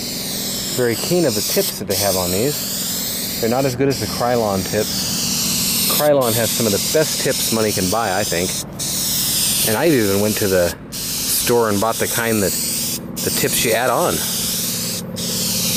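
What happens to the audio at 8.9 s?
Nothing goes wrong at 8.9 s: the audio continues cleanly through that point with no dropout, click or other disturbance.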